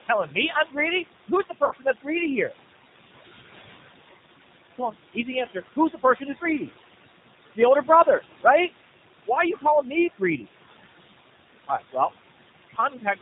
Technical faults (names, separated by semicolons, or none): noise suppressor artifacts; G.729 codec; VoIP packet loss concealed by the speech codec